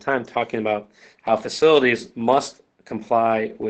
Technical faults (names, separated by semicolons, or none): none